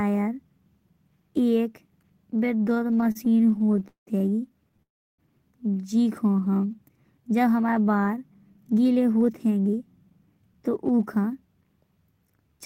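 From 2.67 to 4.80 s, repeated stalls (stutter) occur: around thirty jitter-buffer underruns, the longest 189 ms, are filled by continuing earlier speech, so the span drags. At 4.82 to 5.20 s a call audio freeze follows, with 330 ms of near-silence after a brief fade. This is likely a packet delay that adds about 0.36 s of latency. Between 6.31 and 6.77 s, just before "जब हमारे बार", a jitter buffer slow-down repeats pitch periods, playing at 90% speed and adding 55 ms, so the speech sounds stretched. From 8.50 to 11.62 s, after "जब हमारे बार", a jitter buffer speed-up removes about 0.3 s of pitch periods, and the speech runs hurried at 110% speed.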